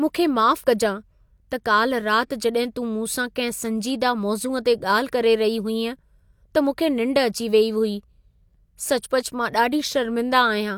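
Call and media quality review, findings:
No faults found in recording.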